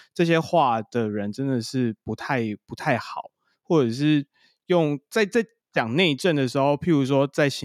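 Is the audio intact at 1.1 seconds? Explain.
Yes, the audio is intact at 1.1 seconds, with the speech continuing there with no audible fault.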